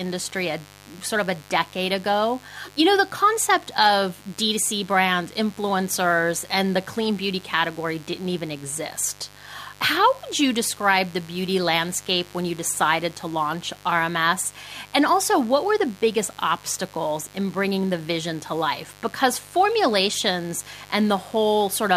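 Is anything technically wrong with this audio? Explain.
Yes. A mains buzz runs through the whole speech clip. It rides on a 50 Hz supply, sitting roughly 25 dB below the speech. Sharp switching spikes enter twice per mains cycle, spreading harmonics up to several kHz. The result is a steady, raspy buzz.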